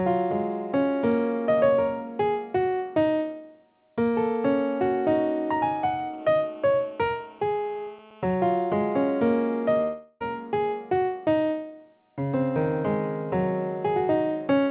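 From 6.18 to 8.35 s a hard, raspy, steady buzz at 217 Hz with dense harmonics sits about 26 dB below the sound: GSM phone buzz, where a nearby phone on a call pulses its transmitter and the audio circuit rectifies the bursts.

At 9.82 s the last sound smears on and fades for about 0.38 s, drops to silence, and returns at 10.22 s with that stretch gone, likely a long network dropout.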